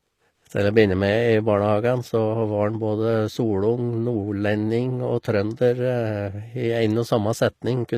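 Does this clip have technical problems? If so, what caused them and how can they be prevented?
Yes. The whole clip has plainly audible codec damage with nothing above 14.9 kHz, and the likely cause is HE-AAC compression at a low bitrate, around 24 kbps. The codec keeps only the lower band properly and fakes the treble by copying lower bands upward under a rough envelope, so the top end doesn't match the speech underneath, and s sounds come out gritty and metallic. To prevent it, encode at a higher bitrate or with plain AAC.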